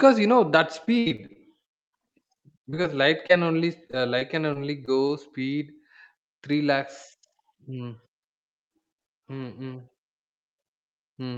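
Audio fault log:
0.85–1.91 s, 2.41–2.86 s and 3.87–5.11 s: repeated packet loss (robotic sound). Packets kept arriving late or not at all, and the receiver bridged each hole by extending the last sound before the next hole followed. In the first run about 19% of the stretch is patched, with one hole as long as 69 ms. The later runs are lighter, at about 12% and 9%, with holes up to 16 ms and 21 ms. The sound turns choppy, with fragments missing.
2.75–3.44 s: jitter buffer slow-down. The buffer's reserve ran short, so the receiver stretched the audio by repeating short pitch periods, adding about 55 ms in all. Playback drops to 93% speed while the pitch stays put, so the sound drags slightly and can waver. The slow-down begins just before the second run of losses ends.
3.27–3.31 s: short concealed packet loss. About 20 ms never reached the decoder in time. The receiver synthesised a continuation of the preceding sound and faded back into the real signal, which leaves a brief smear or wobble inside the slowed passage.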